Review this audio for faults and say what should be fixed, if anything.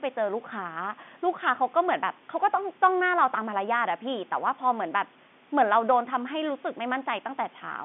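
Nothing to fix: the speech sits in an ordinary telephone band of about 150 Hz to 3.5 kHz with nothing above 3.8 kHz, which is consistent with G.711 A-law coding following the call's microphone processing.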